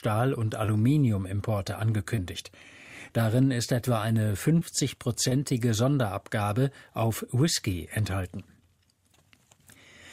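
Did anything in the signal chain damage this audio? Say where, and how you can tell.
Yes. The damage happened on the network, and it shows up as short concealed packet loss. There are brief smears at 0.65–0.70, 2.16–2.19, 3.07–3.11, 4.59–4.63 and 5.29–5.33 s. Each one covers about 20 ms of missing audio, which fits a single lost packet. The receiver filled each hole by extending the preceding sound for around 17 to 22 ms, then crossfaded back into real audio. That repair is what you hear as each wobble.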